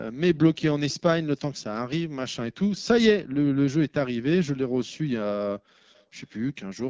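From the start the speech sounds rough and raspy. That is the AMR wideband (HD Voice) codec at one of its lowest rates, and the damage fits a bitrate near 8.85 kbit/s. Its pulse-driven vocal tract model renders speech up to 6.4 kHz, and shaped noise fills the top band.

At 0.89 to 0.96 s, and again more faintly at 5.94 to 6.04 s, a brief, low-level copy of the speech trails the original by 360 ms. This is likely an echo leak: a loudspeaker on the far end fed its microphone, and the echo canceller let a scrap return.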